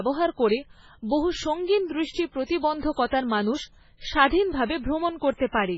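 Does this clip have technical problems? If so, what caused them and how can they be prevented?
Yes. The speech has been squeezed through what is likely heavy MP3 compression, at a rate that sounds like roughly 16 kbps. Starved of bits, the encoder has cut everything above 7.5 kHz and discarded the weaker frequency lines, which drop in and out from frame to frame. The result is a dull, band-limited voice with a watery, swirling texture and blurred consonant onsets throughout. Encoding at a much higher bitrate, or keeping an uncompressed or lossless master, would prevent this.

Pre-echo follows from the same coding. The encoder spreads its quantisation noise across a whole transform block, so when a sharp onset lands late in a block, noise scaled to that loud moment leaks into the quiet just before it. A brief hiss smears ahead of the attack at 2.11 to 2.15 s (38 ms), just after "করে বহু সঙ্গিন", then at 2.44 to 2.49 s (53 ms), 3.06 to 3.12 s (58 ms) and 5.34 to 5.40 s (56 ms). 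A higher bitrate, or an encoder that switches to short blocks on transients, would prevent it.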